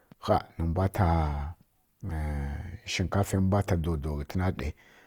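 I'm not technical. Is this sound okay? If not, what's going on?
No. Throughout the speech there is audible Opus compression damage: the sound is grainy and rough. The likely cause is an encoder running short of data, so it rebuilds some detail by copying lower frequencies or filling with noise.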